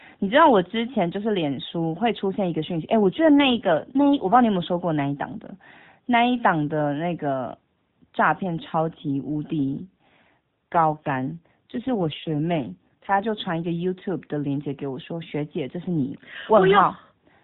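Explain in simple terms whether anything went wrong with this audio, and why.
Twice the mobile network told the phone's speech codec to switch to a lower rate, an AMR rate drop: from 3.02 to 4.36 s and again from 9.70 to 13.25 s. This kind of switch is made when the radio link gets weak. The codec spends fewer bits on the voice itself. The narrow phone-call sound stays the same and nothing cuts out, but in those stretches the speech turns rougher, buzzier and more robotic. It clears again when the higher rate returns.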